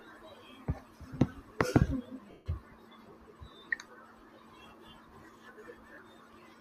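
A speech recording with two bursts of lost LE Audio frames, from 2.31 to 2.46 s and from 5.94 to 5.98 s. The decoder concealed the gaps by repeating a fading, sign-scrambled spectrum, which fits 10 ms LC3 frames (roughly fifteen, then four). On a spectrogram each appears as a blurred, noisy smear, and the longer one dims out.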